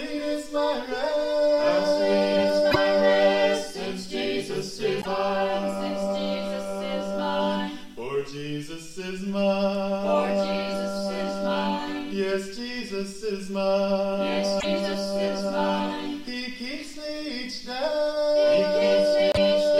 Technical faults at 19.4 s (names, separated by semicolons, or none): broken MP3 bit reservoir